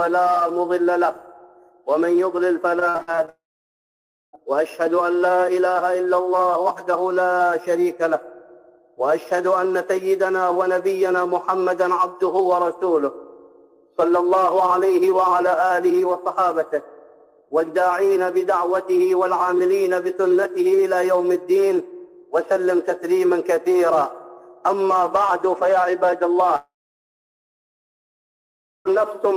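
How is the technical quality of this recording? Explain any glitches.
The recording has two kinds of network fault, clustered near the start and near the end.

From 2.79 to 3.29 s there is repeated packet loss (robotic sound). Seven short gaps, the longest 53 ms, are patched by extending the previous sound. The result is choppy, and unlike a dropout, real audio keeps returning between the holes.

Long network dropouts occur from 3.29 to 4.35 s and from 26.56 to 28.88 s, likely caused by the stream stopping entirely. Each begins with a brief fading buzz or hiss, then falls to near silence for about 0.9 s and 2.2 s respectively. The sound then resumes with that stretch simply missing, with no stuttering in between.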